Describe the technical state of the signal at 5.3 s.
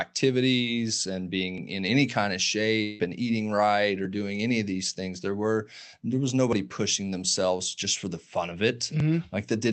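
At 5.3 s the speech signal is intact, with no dropout, clipping, glitch or other fault present at that moment.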